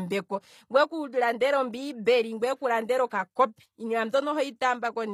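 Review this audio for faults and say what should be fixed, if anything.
Throughout the speech, the treble sounds bright but false: sibilants come across gritty and lispy, and the upper harmonics don't sit cleanly on the lower ones. The likely cause is HE-AAC compression at a low bitrate, which the plainly audible damage suggests is around 24 kbps. Only the lower band is properly coded, and the highs are rebuilt by copying lower bands upward under a coarse envelope. Encoding at a higher bitrate with plain AAC would prevent this.

Between 3.10 and 3.12 s, after "ngweeku landela" and before "kopi iinima", a brief hiss runs ahead of an attack and leaves the onset soft and smeared. This is pre-echo. The codec spread quantisation noise across its whole block, so noise sized for the loud attack also filled the quiet 20 ms before it. A higher bitrate or an encoder with tighter block switching would prevent it.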